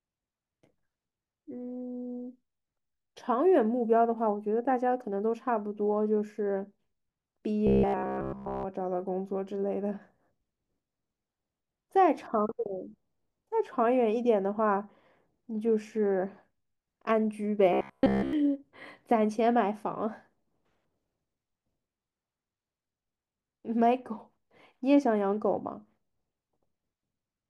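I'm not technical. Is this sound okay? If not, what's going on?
No. There is robotic sound from repeated short buffers from 7.67 to 8.66 s and again from 17.73 to 18.33 s. The speech turns into a stiff, metallic buzz pitched at about 67 Hz. The likely cause is new audio arriving too slowly, so the player keeps repeating a tiny slice of roughly 15 ms in place of the real sound. That repetition covers most of the first stretch and all of the second.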